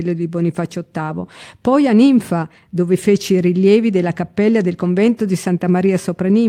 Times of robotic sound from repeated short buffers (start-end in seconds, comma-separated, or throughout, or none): none